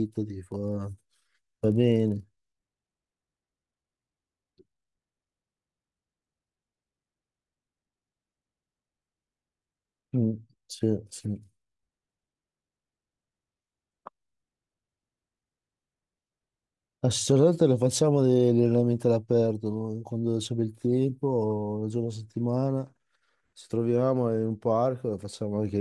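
From 0.52 to 4.04 s, resampler restarted on every block: 48 kHz to 24 kHz conversion reset each 40 ms block, leaving edge errors heard as a 25 Hz buzz under the speech.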